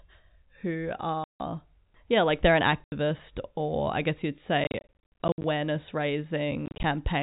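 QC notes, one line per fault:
1.24 to 6.84 s, packet loss filled with silence: hard-edged dropouts at 1.24–1.4 s, 2.84–2.92 s after "yeah like they're an", scattered gaps over 4.64–5.44 s after "or I guess you'd", and 6.66–6.84 s. The gap lengths in steps of 10 ms point to 10 ms packets.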